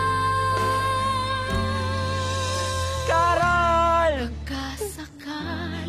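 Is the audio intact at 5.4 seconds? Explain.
No. At 5.4 s the sound is inside an adaptive stream at a lower bitrate, running from 3.33 s to the end. The stream dropped to a thinner encoding, which fits a switch from 96 kbit/s AAC-LC to 24 kbit/s HE-AAC. Nothing remains above about 14.9 kHz, and the top end turns synthetic. Unlike a rebuffering dropout, the change is abrupt but leaves no gap.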